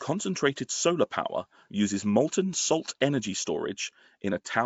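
Nellymoser compression runs through the whole speech clip and is plainly audible. The sound is most likely the Flash-era Nellymoser Asao codec, and the damage fits a stream of around 32 kbps. This codec cuts the signal into short blocks and spends a fixed, small budget of bits on each one. Bands that lose out are replaced with generated noise, which gives the speech a grainy, hissy coating and a smeared, submerged character. Nothing is present above 7.7 kHz, so the top end sounds dull and closed in.

Pre-echo appears at 3.00 s, just after "power uses molten salt". A sharp onset lands late in a coding block. The block's quantisation noise, sized for that loud attack, is spread evenly across the whole block, including the quiet stretch before the attack. The result is a brief hiss of about 10 ms that arrives ahead of the attack, and the onset itself loses its crispness and sounds blurred.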